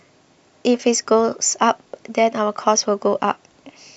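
No audible technical faults.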